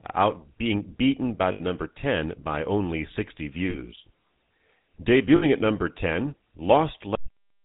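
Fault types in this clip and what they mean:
GSM full-rate codec: throughout, the speech has a buzzy, gravelly roughness from pulse-driven vocal-tract modelling, with nothing above 4 kHz, consistent with 13 kbps full rate.
lost GSM frames: at 1.52, 3.70 and 5.36 s, gaps of 80, 40 and 60 ms are filled by repeating the last good frame, heard as brief metallic ringing.
cut-off end: at 7.15 s the speech stops mid-sound and drops straight to digital silence with no decay, because the final buffers were never played.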